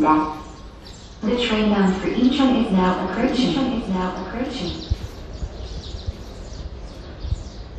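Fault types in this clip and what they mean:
Doubled audio track: from 3.13 s to 6.63 s a second full-band copy of the sound runs about a second behind the original, roughly 5 dB quieter, with no decay or room colour. It cuts in and out abruptly, likely from a slower duplicate capture path.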